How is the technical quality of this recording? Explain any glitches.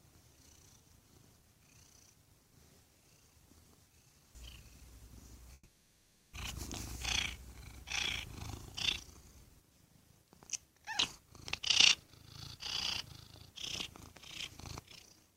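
The recording has one clear glitch, a long network dropout. From 5.53 to 6.35 s the last sound is stretched into a fading buzz-like continuation for about 0.8 s, then a split-second of silence. The likely cause is that no audio arrived, so the receiver filled the gap by extending the final sound. When the sound resumes, that 0.8 s of the original is simply gone. Unlike a short packet-loss tick or a clean cut, the fill here is smeared and decaying.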